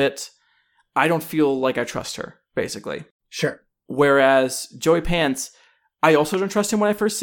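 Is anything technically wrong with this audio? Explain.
Yes, there's a single loud pop from 6.34 to 6.36 s, about 10 dB above the speech, likely a voltage spike from a plug, switch or static, with the speech continuing underneath.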